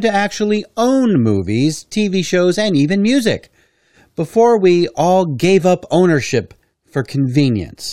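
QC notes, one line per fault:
No faults found in this speech recording. Nothing in it calls for a timestamp or a note.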